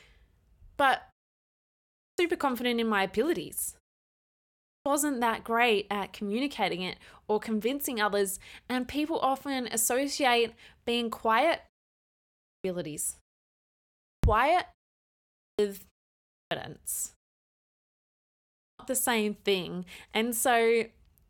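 The output device drops into a sleep state during pauses and needs time to wake before it passes sound again, so each restart shows a clipped start after a pause at 1.79, 4.46, 12.28, 13.81, 15.17, 16.14 and 18.4 s. Roughly 0.36 to 0.43 s is swallowed each time, after pauses of 0.31 to 1.32 s, and the speech bursts abruptly out of silence with its opening sounds missing.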